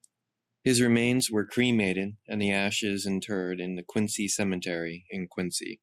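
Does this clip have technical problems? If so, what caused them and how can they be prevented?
Yes. Word clock ticks run through the speech from 0.21 s to 5.64 s. They come at a steady rate, roughly every 0.3 s, about twenty in all. A digital link is being read by a device on its own clock, not locked to the sender's. The two clocks differ by around 100 ppm, so they slip past each other regularly. At each slip, one sample is dropped or repeated, causing a sharp tick. To prevent this, lock the receiving device to the sender's word clock.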